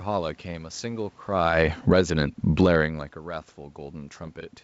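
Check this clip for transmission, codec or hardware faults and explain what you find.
Three faults are audible: two automatic gain control swings in the middle of the speech and a burst of bit errors near the end.

From 1.27 to 2.82 s, automatic gain falling: the gain control judged the input too loud and cut gain by about 13 dB. Voice and background sink together as the talker shifts position around 1.5 s.

From 2.01 to 3.86 s, automatic gain rising: after the input dropped by about 23 dB, the control pushed gain up by about 8 dB. Speech and room noise swell together over well over a second.

From 4.23 to 4.29 s, bit errors on an ADPCM link: flipped bits at a low error rate, under one percent, corrupted the decoder's step size and prediction across what sounds like a few frames. The result is pops and rough bursts with brief level jumps. The wideband quality fits G.722 at 64 kbit/s.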